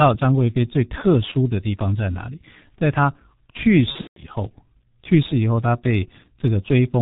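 Throughout, the speech has passed through the G.723.1 codec, at a rate that points to its 6.3 kbit/s mode. The codec packs the signal into 30 ms frames and rebuilds the voice from a coarse model that adapts slowly, and nothing above 4 kHz survives. The damage here is heavy: the voice sounds muffled and hoarse, with consonants smeared together instead of crisp.

From 3.92 to 4.21 s, VoIP packet loss concealed by the speech codec interrupts the stream. About 180 ms of audio went missing in gaps spread over 240 ms, the longest run lasting 150 ms, which fits roughly six lost 30 ms frames. The decoder filled each gap by extending its last pitch and filter while lowering the gain, so the speech there turns into a fading buzzy, coloured tone and stays weak and distorted briefly after the packets return.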